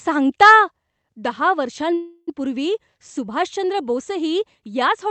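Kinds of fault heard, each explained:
microphone overload: From 0.42 to 0.53 s the loudest speech turns harsh and crackly, with peaks flattened about 4 dB past the converter's ceiling, likely from input gain set too high. Unlike codec coding noise, the grit appears only on those peaks.
microphone volume stepped down: At 1.02 s the speech and background drop together by about 4 dB in one step and stay there, likely the call software lowering the input after the distorted peak. A fade or compressor would change level gradually instead.
call audio freeze: From 1.93 to 2.29 s the last sound is stretched into a fading buzz, ending in about 30 ms of silence, likely an emptied jitter buffer. Speech then resumes where it stopped, adding 0.34 s without losing anything, unlike a dropout.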